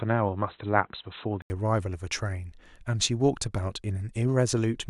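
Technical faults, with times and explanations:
0.0–1.5 s, input switched to a poorer device: for the opening stretch, the recording likely came from a lesser input such as a headset's call profile, which passes nothing above 4 kHz. The speech sounds dull and boxy, with a faint background noise of its own sitting far below it, until about 1.5 s, when an 80 ms gap marks the change to the fuller-band input at much the same loudness.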